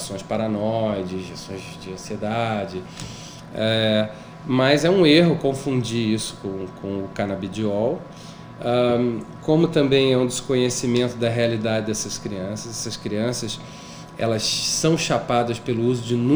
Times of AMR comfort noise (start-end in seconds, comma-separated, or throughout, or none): none